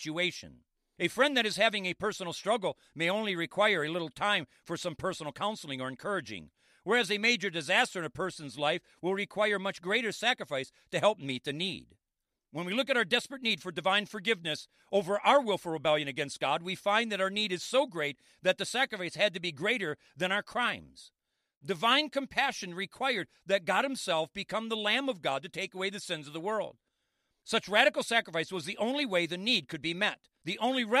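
No technical faults are audible.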